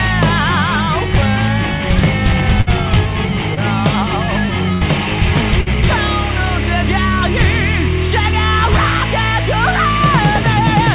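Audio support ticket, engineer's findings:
Burst of packet loss, 2.61–2.69 s, 4.73–4.83 s, 5.61–5.68 s. Jitter buffer/decoder concealment: last sound extended and faded as held buzz or hiss, 55, 81 and 53 ms; resumes with 60, 80 and 60 ms absent.

Short concealed packet loss, 3.55–3.59 s. Decoder concealment bridges a hole of about 20 ms by continuing preceding sound for 21 ms, then crossfades back. Audible as brief smear or wobble. Band limit at 4 kHz fits G.711 mu-law on the call path.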